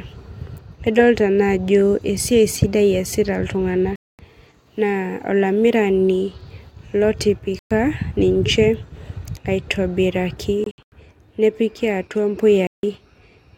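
Silent gaps at 3.96–4.19 s, 7.59–7.71 s, 10.64–10.92 s (several short holes before "nepiki atua"), and 12.67–12.83 s after "nepiki atua": likely Bluetooth dropout, where lost packets mute playback before the speech resumes further on.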